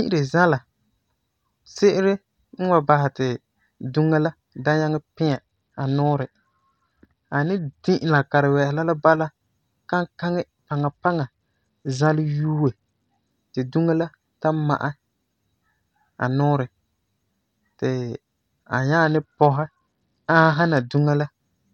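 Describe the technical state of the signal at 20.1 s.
A Bluetooth SBC bit pool drop covers 20.1 s, running from 19.04 s to 20.99 s. The link has evidently come under pressure, and the encoder has cut its bit budget sharply; the sound points to a bit pool falling from around 31 to about 9, near 72 kbps. With so few bits, the upper sub-bands are starved and the rest coarsely quantised, so the speech turns dull and muffled, with a gritty, grainy noise riding on it until the rate recovers.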